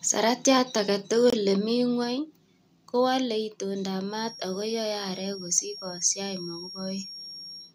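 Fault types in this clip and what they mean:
Microphone volume stepped down: the speech level drops suddenly by about 2 dB at 1.02 s and again at 2.04 s, likely the call software lowering the input volume.
Bluetooth dropout: a brief hole of silence from 1.30 to 1.35 s, about 23 ms, likely one lost audio frame, with the speech resuming as if it had played on.
Feedback whistle: a thin 5.6 kHz whistle sits roughly 15 dB under the speech from 4.05 s to the end, likely a speaker-to-microphone loop held at the edge of feedback.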